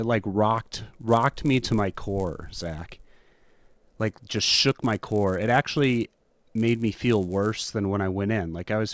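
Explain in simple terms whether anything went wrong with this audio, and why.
From 0.56 to 7.65 s the speech carries a 100 Hz buzz: the resampler restarted on every block, so each 10 ms chunk's edge has a small glitch.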